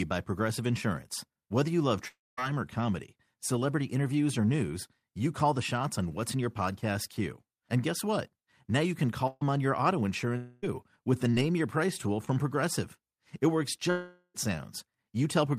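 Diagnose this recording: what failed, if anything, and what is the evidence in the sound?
At 2.07–2.39, 10.37–10.64 and 13.90–14.36 s the speech stretches into a fading buzz or hiss, then resumes further on: likely long network dropouts losing 0.26–0.44 s each.

At 9.27–9.43 s a decaying held buzz or hiss replaces about 140 ms of speech. This is a burst of packet loss in the network, concealed by the receiver before playback skips ahead.

A brief smear at 12.25–12.28 s is short concealed packet loss. About 20 ms never reached the decoder in time and was patched by continuing the preceding sound.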